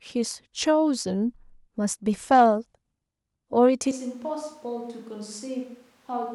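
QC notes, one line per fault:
3.92 s to end: switch to a distant microphone. The speech abruptly goes roomy and thin, around 10 dB quieter and noisier, likely because the close mic dropped out.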